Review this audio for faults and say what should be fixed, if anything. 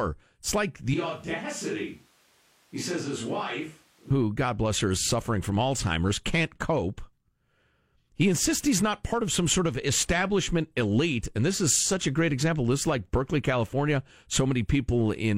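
From 0.94 s to 4.10 s the close microphone's feed likely dropped out and the recording fell back to a more distant pickup, a switch to a distant microphone. The speech abruptly turns roomy and hollow, with thinner bass, a level drop of about 5 dB, and room noise rising to roughly 30 dB below the speech. It snaps back to the close, full sound just as suddenly at 4.10 s. Fix it by re-recording that passage or patching it from a backup close-mic track, and prevent a repeat by checking the close microphone's connection and monitoring its channel directly throughout the take.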